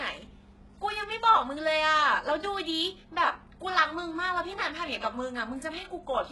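Throughout the speech, the signal has likely passed through HE-AAC compression at a very low bitrate, consistent with roughly 12 kbps, where the treble is rebuilt by copying lower bands upward. The result is heavy damage: sibilants sound gritty and metallic, with nothing above 11.5 kHz.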